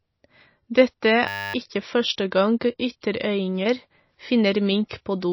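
Throughout the speech, a heavily starved encoder, likely MP3 compression, has thrown away the treble and thinned out the weaker frequency detail. Nothing survives above 5.8 kHz, so the sound is dull and boxy. The fine detail that remains flickers in and out from frame to frame, giving a plainly audible watery, swirling texture and smeared onsets. The damage points to a bitrate somewhere around 24 kbps.

From 1.28 to 1.54 s, a system hang loop occurs: the computer or driver stalled while the audio hardware kept replaying the same 10 ms buffer, 26 times over. Because that slice is so short, the repetition fuses into a steady, tonal buzz at 100 Hz instead of a stutter. The speech that should have played there is gone, roughly a third of a second of it.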